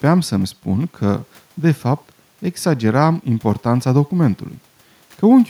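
Nothing stood out on listening to this speech recording.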